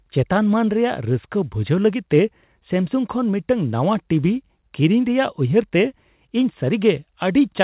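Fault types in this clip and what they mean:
No faults are present.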